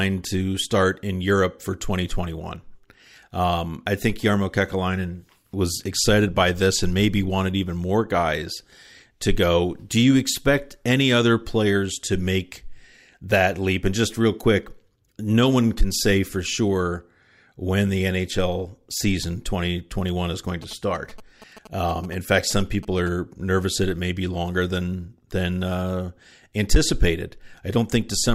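From 20.49 s to 23.09 s the speech is overlaid by GSM signalling bursts: a galloping dit-dit-dit of ticks and short buzzes, sitting roughly 20 dB below the speech. The buzz repeats at about 217 Hz, the frame rate of a 2G handset's transmissions, which points to a nearby phone exchanging control traffic with its network. Some part of the audio circuit rectifies those radio bursts, turning them into audible clicks and buzz.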